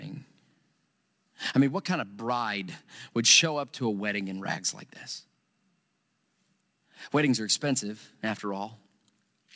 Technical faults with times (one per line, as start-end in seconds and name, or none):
none